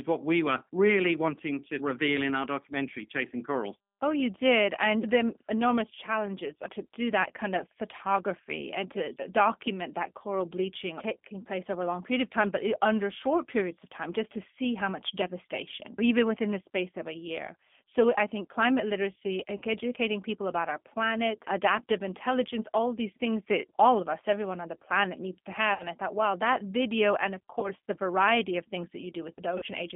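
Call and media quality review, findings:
G.729 codec, throughout. Band-limited to about 200 Hz–3.5 kHz, nothing above. Plainly audible roughness with a slightly synthetic timbre. Mechanism: speech is rebuilt each 10 ms frame from a vocal-tract filter, a pitch predictor and sparse pulse excitation. This fits G.729A at 8 kbit/s. Probable component: VoIP codec leg.

VoIP packet loss concealed by the speech codec, four gaps:
19.58–19.64 s, after "I think climate literacy", 40 ms lost.
25.74–25.85 s, after "the planet needs to", 60 ms lost.
27.59–27.72 s, after "that video and of", 40 ms lost.
29.58–29.65 s, 40 ms lost.
Symptom: extrapolated buzzy tone or coloured noise fading out, with weak, distorted recovery into the following speech. Mechanism: the decoder extends its last pitch and filter at decaying gain. Each gap fits two or three lost 20 ms packets.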